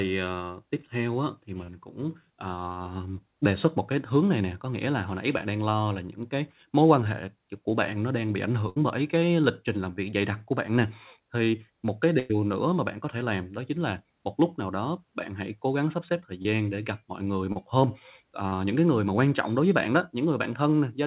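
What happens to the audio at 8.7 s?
At 8.69 s the speech breaks up in a burst of packet loss lasting until about 8.77 s. A short run of packets never arrived in time, so the receiver's concealment repeats the last received sound for roughly 70 ms while fading it down, giving a brief smeared, decaying tail instead of real speech. When playback resumes, about 70 ms of the original audio has been skipped. Throughout, the narrowband call codec caps everything at 4 kHz.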